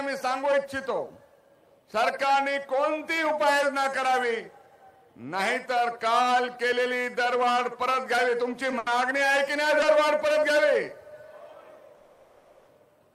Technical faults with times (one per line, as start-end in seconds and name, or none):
8.78-8.91 short stall from a late packet
11.95-12.69 call audio freeze